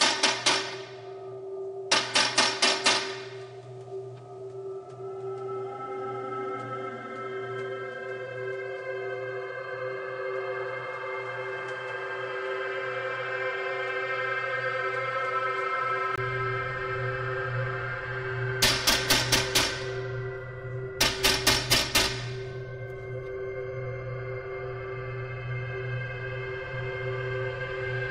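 From the start to 16.18 s, the band stops near 10.5 kHz and a new noise floor sits about 35 dB under the signal. At 16.18 s a 20 ms gap marks the change. The cause is likely an input switched to a poorer device. Loudness barely shifts.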